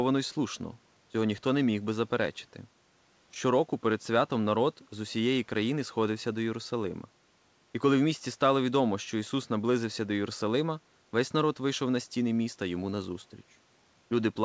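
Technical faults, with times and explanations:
Nothing here counts as a fault: the speech simply carries the band limit of a call path, with nothing above 8 kHz, which fits a wideband codec such as G.722.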